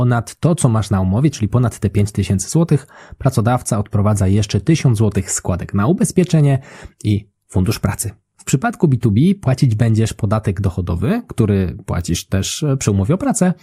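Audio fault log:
No technical fault can be heard anywhere in the speech signal.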